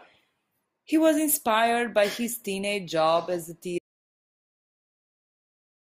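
The input signal was likely lost, through a disconnected device, failed link or mute, while recording carried on writing silence: an audio dropout to silence. At 3.78 s, right after "teenage job as a", the speech cuts off into total silence, with no room tone, lasting to the end.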